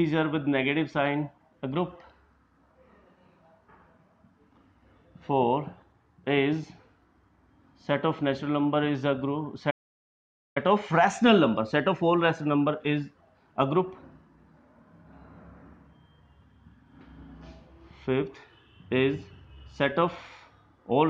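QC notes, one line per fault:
9.70–10.57 s, playback stall: the sound cuts off mid-flow into silence for about 0.85 s, then carries on. The gap is most likely the player running short of data or its output thread being held up, leaving nothing to send until it recovered.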